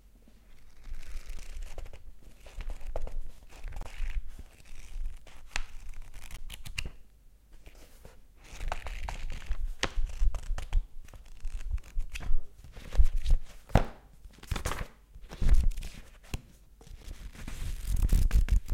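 At 1.38 s, 3.83 to 3.85 s, 6.37 s and 17.03 s the audio drops into blocks of digital silence, each a click or short hole, likely where output wasn't delivered in time. Gaps of about 12 ms fit a 512-sample buffer. On a waveform they appear as near-flat lines, and on a spectrogram as blank vertical stripes.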